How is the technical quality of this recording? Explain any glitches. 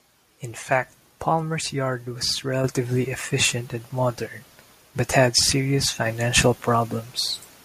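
The recording has two abrupt level jumps. At 2.64 s, after "yard was", the microphone volume is stepped up by about 6 dB. At 6.06 s, after "modern but had serious", it rises about 4 dB. The input gain was raised in a single step each time. Speech and background noise get louder together, mid-sentence.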